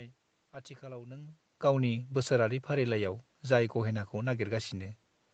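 No technical faults: the speech carries the usual band limit near 8 kHz of an Opus call path, the level shift around 1 s is the talker moving, and the background is ordinary room noise.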